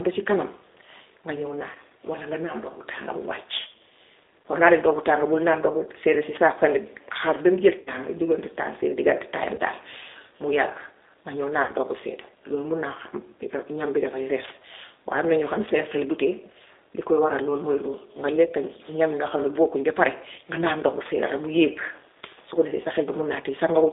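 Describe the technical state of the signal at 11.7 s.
VoIP packet loss concealed by the speech codec runs from 11.62 to 11.72 s, just before "ndox bu sedda". About 60 ms of audio went missing, which fits three lost packets. The decoder filled the gap by extending its last pitch and filter with falling gain, so the speech smears into a fading buzzy tone or coloured noise. Because each frame builds on the one before, the following speech comes back weak or distorted.

The whole passage also carries the G.729 codec at 8 kbit/s, confined to about 300 Hz to 3.7 kHz. Speech is rebuilt from a vocal tract model, a pitch predictor and a few pulses per frame, which gives a plainly audible rough, synthetic, band-limited quality with no content above the line band.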